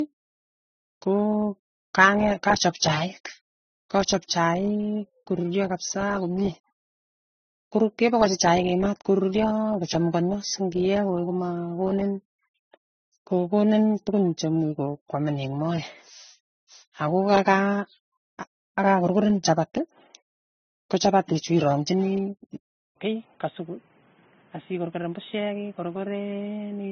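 The speech has likely passed through transcoding between lossy codecs, first an AAC-type encoder and then MP3, both at what sound like low bitrates. Each stage spent its scarce bits on the previous stage's damage and added its own, so smeared, warbling detail from the first codec sits under the second codec's swirly, pre-echoed texture. The band stops at 6.3 kHz, the lowest cut-off in the chain, giving a muffled, watery quality from start to finish.

At 22.88 s the input likely switched to a poorer device, such as another microphone or a headset's call profile, and it stays there to the end. The switch leaves an 80 ms gap of silence, and the speech comes back about 10 dB quieter. The narrower device passes nothing above 3.8 kHz, so the sound turns boxy and telephone-like. A new background noise floor also appears, roughly 30 dB below the speech.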